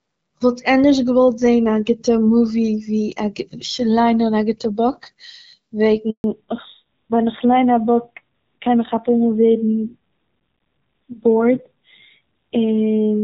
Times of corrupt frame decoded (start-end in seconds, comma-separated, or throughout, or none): none